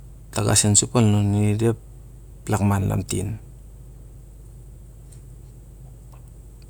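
Speech, with no audible faults.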